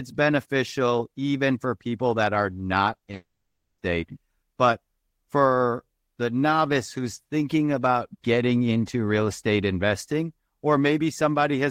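Repeated packet loss (robotic sound) runs from 2.93 to 3.14 s. Over this fifth of a second the speech keeps breaking into short holes, the longest about 20 ms, and each hole is papered over by stretching the preceding sound. Roughly a third of the span, about 70 ms in total, is patched-in material rather than real audio, so the stretch comes across as choppy, with small pieces of speech gone.

From 3.14 to 3.79 s the audio stops arriving altogether, most likely a long network dropout following straight on from that choppy stretch. The last sound is drawn out into a buzzy or hissy smear that fades away, and then roughly 380 ms of silence follows before speech resumes at 3.79 s. All 640 ms of original audio in that gap is lost, so the speech picks up further along without the missing part.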